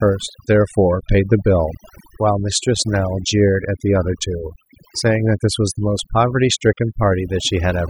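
Overdone noise removal runs through the whole clip: a noise reduction stage set too strong pulls individual frequency bands down whenever they sit near its noise estimate, taking quiet parts of the speech too, so the background drops and breaks up into twinkling specks.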